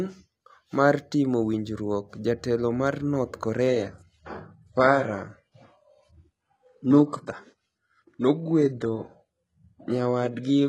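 From 3.67 s to the end, an adaptive stream at a lower bitrate takes over: abruptly, with no gap, treble above 11.5 kHz vanishes and codec artefacts rise.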